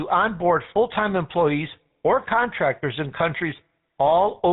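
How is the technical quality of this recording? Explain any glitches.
The quality is poor: the whole recording carries plainly audible phone-codec damage, with one brief dropout near the end.

The GSM full-rate codec affects the entire clip. It rebuilds speech from a vocal-tract model excited by sparse regular pulses, which fits a 13 kbps stream. That gives a buzzy, gravelly roughness. A spectrogram shows a hard ceiling at 4 kHz with nothing above it.

Lost GSM frames occur from 3.18 to 3.21 s, right after "employees or contractors in". About 20 ms of data went missing, and the decoder reused the last good frame's settings. This produces a short rough, metallic smear. On the waveform it appears as a brief, repetitive patch.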